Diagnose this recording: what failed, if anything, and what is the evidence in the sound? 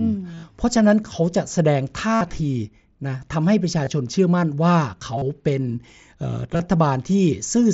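Concealed Bluetooth headset packet loss occurred on the wireless link, at 0.31–0.43 s, 2.15–2.21 s, 3.85 s, 5.18–5.22 s and 6.54–6.60 s. The receiver patched gaps by repeating recent waveform, producing buzzy held tones that show as regular, repeating waveform cycles and evenly spaced spectrogram stripes.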